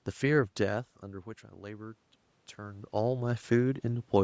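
From 0.65 s to 4.14 s there is automatic gain rising: after the input level fell by about 15 dB, the call's gain control judged the signal too quiet and gradually raised its gain by about 5 dB. The speech and the room noise swell together over those three and a half seconds. That shared rise separates it from the talker moving, which happens near 0.5 s and 2.5 s and changes only the voice level, not the background.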